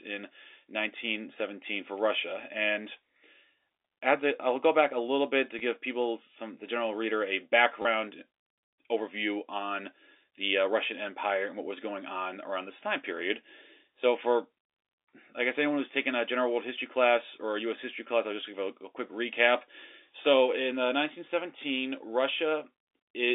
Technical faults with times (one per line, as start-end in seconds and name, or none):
5.59 packet loss with last packet repeated
7.82-7.85 packet loss with last packet repeated